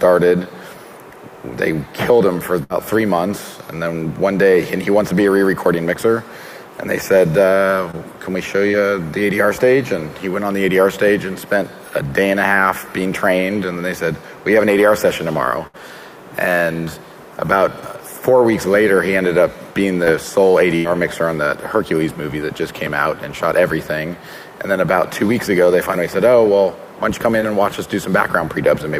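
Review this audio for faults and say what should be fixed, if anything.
A burst of packet loss occurs at 2.63–2.82 s, 15.67–15.76 s and 20.76–20.86 s, with 60, 60 and 80 ms of audio missing. The receiver extends the last sound for 62, 66 and 81 ms, fading it down, so the gap comes out as a held buzz or a fading hiss before the audio resumes.

Short concealed packet loss occurs at 7.91, 8.71, 20.04 and 27.40 s, each losing about 20 ms. The decoder fills 15 to 20 ms by continuing the preceding sound and blending back into the real audio, which produces a brief smear or wobble.

To prevent both, add forward error correction and a larger jitter buffer, and fix the network path that is dropping or delaying packets.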